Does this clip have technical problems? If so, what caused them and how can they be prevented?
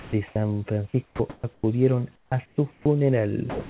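Yes. The sound chopped by the voice detector occurs from 0.00 to 0.36 s and from 1.06 to 1.64 s. About 210 ms and 380 ms of speech edges are swapped for synthetic noise, so the sound stutters. The likely cause is a voice detector toggling transmission on and off. Relaxing its threshold or adding hangover time prevents this.

Comfort noise in place of the background appears from 2.16 to 2.86 s and from 3.50 to 3.69 s, covering about 420 ms and 200 ms. The real room noise, about 36 dB below the loud speech, gives way to a flat, featureless hiss shifted about 8 dB in level, likely from discontinuous transmission. Disabling discontinuous transmission keeps the genuine background.

The onset clipped by the voice detector falls at 2.84 to 2.86 s, where 20 ms of the sound's start is replaced by comfort noise and the word begins abruptly. The likely cause is the detector reacting late. Adding a look-ahead buffer or a lower detection threshold preserves the beginning.

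Across the clip the band stops at 4 kHz, consistent with a narrowband 64 kbps G.711 mu-law call path.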